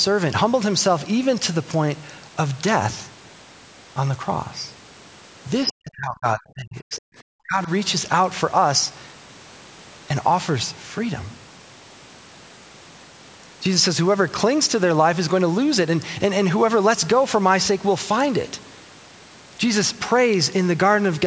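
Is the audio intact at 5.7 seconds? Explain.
No. From 5.67 to 5.72 s there is a brief, faint scrap of other side's voice leaking through, roughly 25 dB below the talker. It is most likely loudspeaker playback of the far end reaching the microphone and surviving the echo canceller. At this level and length it registers as a short blip layered under the main speech rather than as intelligible words.

Overlapping it, from 5.69 to 7.04 s, the talker's speech is suppressed in double talk. Level falls sharply, by as much as around 40 dB at the deepest point, and the voice comes through dipped, adding up to about a second and a half of damaged audio. The likely cause is the echo canceller detecting far-end and near-end activity at once and attenuating both, pulling the wanted speech down along with the echo.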